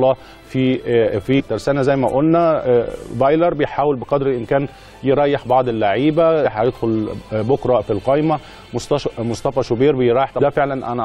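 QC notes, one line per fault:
1.38–1.40 s, 6.44 s and 10.39 s: damaged data in a compressed stream. Corrupted bytes make the decoder misread frames and lose sync while hunting for the next frame header, so each spot produces a brief chirp or blip cutting across the sound.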